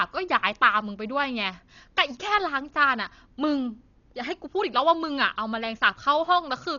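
A speech recording carries heavy codec damage from start to finish, likely from Dolby Digital compression at a very low rate, which fits a bitrate of around 40 kbps. Nothing survives above 7 kHz, so the voice sounds dull, and the encoder has left many frequency lines without detail, refilled at playback with noise that flutters roughly around voiced tones. That noise fill, rather than a clean low-pass roll-off or the swirly, metallic smearing of MP3, is what marks it.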